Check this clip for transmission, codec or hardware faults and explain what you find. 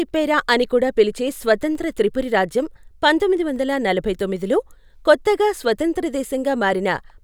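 One fault stands out in the speech. Clock drift buffer slips, 1.75 to 7.18 s: a short click recurs every 1.81 s, about four in all. The likely cause is two devices whose clocks disagree by around 100 ppm, so the buffer between them periodically drops or repeats a handful of samples, producing each tick.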